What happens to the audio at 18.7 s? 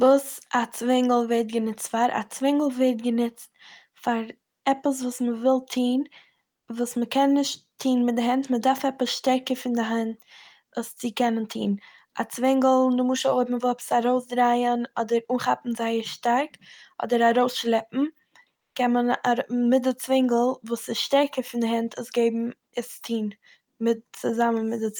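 Discontinuous transmission, likely Opus DTX, stopped sending audio from 18.57 to 18.75 s, and the receiver filled those 180 ms with comfort noise in place of the background: a flat, featureless hiss about 11 dB quieter, ending just before "קען מען".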